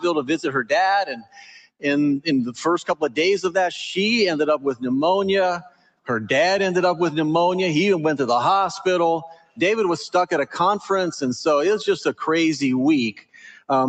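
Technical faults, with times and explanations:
Throughout: noise suppressor applied to music or sounds. A suppressor tuned for speech stays active across the whole clip. It treats steady tones, ambience and decaying tails as noise and pulls them down. Onsets pass, but sustained parts sink, so the level swings by about 10 dB. The result pumps and thins out. The sound also lacks anything above 8 kHz, which comes from the Opus call path's bandwidth and is not a separate fault.
1.1–1.85 s, 2.9–3.17 s, 4.58–4.83 s, 5.58–6.09 s, 9.28–9.6 s, 13.13–13.69 s: sound cut by the noise suppressor. In each span the suppressor decides the sound is noise and clamps it harder than elsewhere. The deepest drops are about 20, 13, 16, 21, 20 and 20 dB. Sustained or fading material collapses and its decay ends early, while sharp attacks mostly survive. Each dip covers most of its span.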